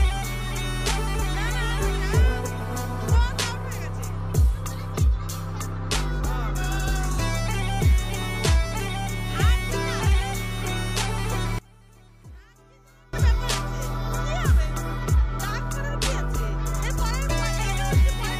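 From 11.59 to 13.13 s the sound drops by about 26 dB into a faint residue, likely one channel inverted, so the shared content cancels in the mono sum. The waveform shrinks to a thin band, and the spectrogram nearly empties.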